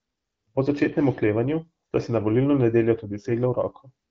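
Speech carried over the AMR wideband (HD Voice) codec at 12.65 kbit/s, band-limited to about 7 kHz as that path normally is, with no technical faults audible.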